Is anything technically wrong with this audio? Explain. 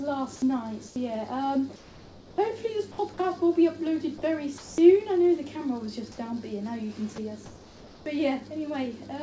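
Yes, there are two kinds of fault, both of which fit discontinuous transmission on a call path whose audio stops at 8 kHz, as a wideband call codec would.

Comfort noise in place of the background appears at 0.88–0.96 s, 1.76–2.38 s and 7.46–8.06 s. In the pauses, the real background, about 23 dB below the loud parts, likely gave way to synthetic noise shaped to match it. That noise is about 5, 4 and 3 dB quieter respectively. On a spectrogram these stretches look smooth and textureless. On a waveform they show a slightly lower, even noise floor.

Sound dropped by the voice detector occurs at 2.92–2.98 s, 4.58–4.78 s and 7.16–7.18 s. The detector likely mistook quiet sound for background, so about 30, 140 and 10 ms of sound were lost to steady noise. On the spectrogram these appear as abrupt gaps filled with flat noise, and on the waveform the envelope is clipped off early.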